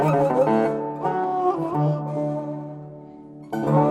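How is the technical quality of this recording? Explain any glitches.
The technical quality is compromised by plainly audible codec damage running through the whole recording.

MP2 compression, throughout: the sound is dull, with a gurgling, granular grain and upper frequencies that flicker in and out. This likely comes from MPEG Layer II coding starved of bits, which fits a rate around 80 kbps, where upper sub-bands are dropped and the remaining bands are coarsely quantised.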